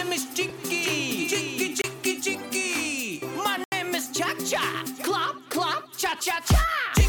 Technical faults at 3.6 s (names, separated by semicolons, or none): block of digital silence